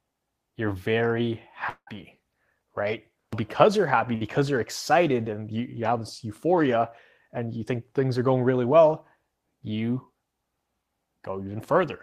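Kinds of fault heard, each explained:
Long network dropout: Right after "you're very", from 1.69 to 1.90 s, the stream goes quiet. The last sound is stretched into a buzz or hiss that fades over about 175 ms, ending in about 70 ms of silence, and about 180 ms of audio is simply gone. The likely cause is a stall in the network path. It reaches true silence, which a brief packet-loss burst does not.
Burst of packet loss: At 4.15 to 4.24 s, between "right because you're happy" and "you're excited and", about 60 ms of audio never arrives. The receiver covers the gap for about 59 ms by holding and fading the last sound, then picks up further along with that slice missing. Unlike the dropout, the gap is short enough that the fill never decays into silence, so it sounds like a smeared hiccup.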